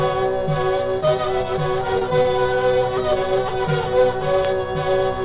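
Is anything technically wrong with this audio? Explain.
Yes, there are two brief network faults close together on what sounds like a narrowband call path, with nothing above 4 kHz, consistent with G.711 mu-law.

From 1.99 to 2.03 s there is a short concealed packet loss. About 20 ms of audio never arrived, and the decoder filled the gap by extending the preceding sound before blending back. It comes across as a small smear or wobble, and that moment of the original is gone.

From 2.23 to 2.26 s there is a short stall from a late packet. The jitter buffer ran dry, so the receiver held the last sound for about 16 ms until the packet arrived. Unlike the earlier loss, nothing is missing: one sound simply lingers slightly too long, with a slight buzz or dip, and everything after it lands about 16 ms later.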